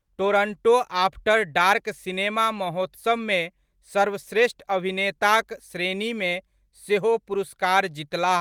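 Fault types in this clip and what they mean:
No fault types are present in this clip.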